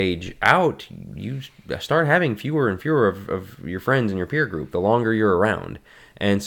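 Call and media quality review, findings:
No audible faults found.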